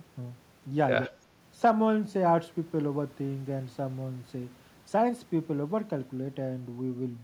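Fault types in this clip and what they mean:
Speech suppressed in double talk: the speech briefly dips by about 20 dB from 1.07 to 1.14 s, likely the echo canceller clamping down while both ends talked.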